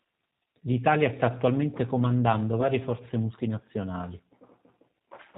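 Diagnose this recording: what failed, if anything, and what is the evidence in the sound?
The speech runs through the G.729 codec for the whole clip, a codec-stage fault. Nothing reaches above 4 kHz, and the speech has a rough, synthetic texture, with plainly audible damage consistent with 8 kbit/s G.729A. A plain low-pass filter would only dull the sound. This codec also roughens it.

At the network stage there is VoIP packet loss concealed by the speech codec. From 0.44 to 0.54 s, losses of up to 20 ms are scattered across 100 ms, about 50 ms in total. At 2.61 s a single loss of roughly 10 ms falls between "sta attualmente comandando" and "forze multinazionali". The decoder fills each gap by extending the last pitch and filter into a buzzy tone or coloured noise that fades, and the speech stays weak or distorted for tens of milliseconds afterwards. A plain dropout would leave silence or a click instead.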